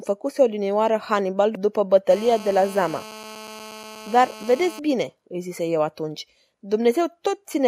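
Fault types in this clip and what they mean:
GSM phone buzz: A 2G handset close to the recording chain was transmitting in bursts about 217 times a second, and the audio circuitry rectified those radio pulses into the signal path. The result is a hard, raspy buzz at 217 Hz, rich in harmonics and unrelated to the speech, sitting about 18 dB below it. It runs steadily from 2.10 to 4.79 s, as the phone holds a call, then stops.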